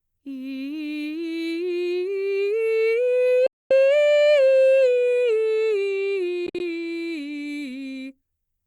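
Audio packets likely failed to reach the wireless headphones in time and were discarded, producing a Bluetooth dropout in this music twice. From 3.47 to 3.71 s the output cuts to silence for about 240 ms, then resumes further along as though the music had kept playing. At 6.47 to 6.60 s the loss is broken up: about 80 ms of silence in short gaps, the longest about 53 ms, giving a brief stutter.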